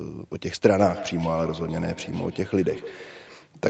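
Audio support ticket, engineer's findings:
Feedback echo between two devices, 0.72–3.54 s. Sound returns roughly every 150 ms, thinner and ringing, loudest about 15 dB below the speech. Second device in the room replaying this mic's audio; local echo canceller can't remove another device's playback.

Lost packet rebuilt from error correction, 2.77–2.79 s. No gap, but a rougher, noisier 20 ms patch, which fits a single lost packet. Opus decoder played the low-bitrate copy carried in the following packet.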